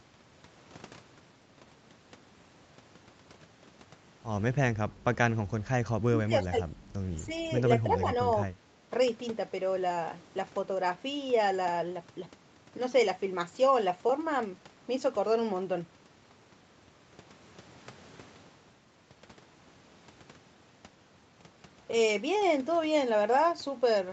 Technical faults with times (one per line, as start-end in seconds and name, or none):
6.05-6.55 speech suppressed in double talk
7.26-7.32 speech suppressed in double talk
7.99-8.09 speech suppressed in double talk